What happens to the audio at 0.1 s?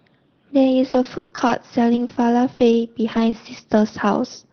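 Nothing goes wrong at 0.1 s: the speech passes through the WebRTC call path intact, with the Opus codec's band limit, consistent with a 6 kHz bandwidth, simply softening the top end.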